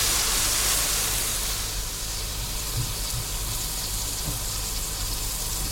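Listening closely to these everyday sounds, nothing stood out as a technical problem at any point in the recording.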